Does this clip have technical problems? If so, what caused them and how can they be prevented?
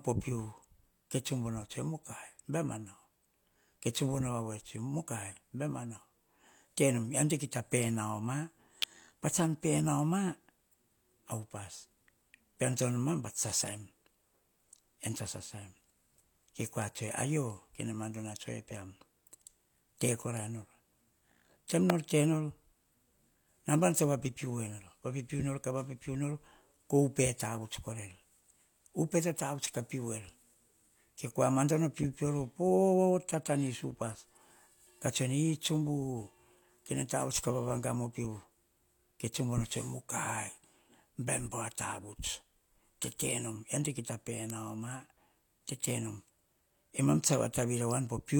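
Yes. Electrical switching spikes, likely from a nearby switch, motor or static discharge arcing into the audio line, add a sharp snap or tight click cluster at 8.82, 21.90 and 44.50 s. Route balanced, shielded cables away from switches and motors, ground the equipment properly, and reduce static buildup around the recording setup.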